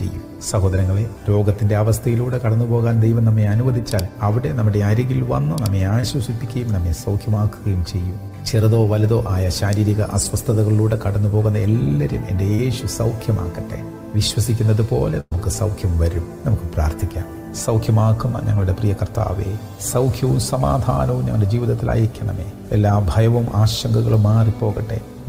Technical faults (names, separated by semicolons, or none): short concealed packet loss; burst of packet loss